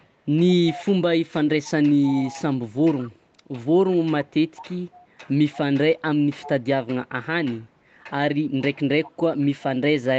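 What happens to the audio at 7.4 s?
Nothing goes wrong at 7.4 s: the speech passes through intact, with only the usual band limit of the call path, which leaves nothing above 8 kHz.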